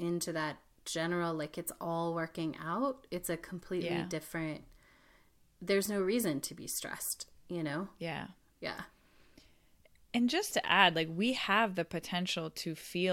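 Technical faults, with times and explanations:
No technical faults detected anywhere in the speech recording.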